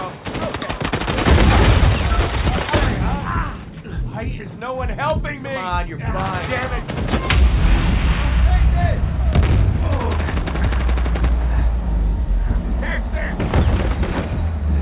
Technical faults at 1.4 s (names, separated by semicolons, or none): none